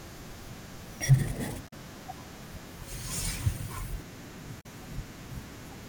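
At 1.65 to 1.73 s and again at 4.57 to 4.66 s, damaged data in a compressed stream makes the decoder misread corrupted frames and lose sync. Each event is a roughly 90 ms disruption while the decoder searches for the next frame header.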